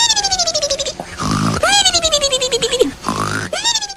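At 0.86 s the receiver loses its digital stream and cross-fades over about half a second to the station's FM broadcast, staying there until 3.69 s: a classic digital radio blend to analogue. Steady hiss rises to roughly 35 dB below the programme, while the overall level holds without a jump. On a spectrogram, a faint broadband noise floor fills the gaps between components across that span, and the waveform envelope stays essentially unchanged.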